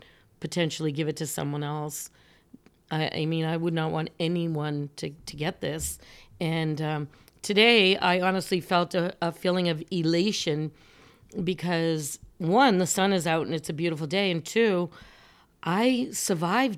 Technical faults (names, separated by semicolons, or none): none